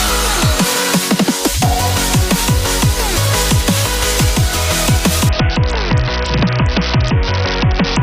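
At about 5.29 s a Bluetooth SBC bit pool drop kicks in and lasts to the end. The treble dulls and gritty noise creeps in, which fits the link squeezing the bit pool from around 31 down to 6, roughly 55 kbps.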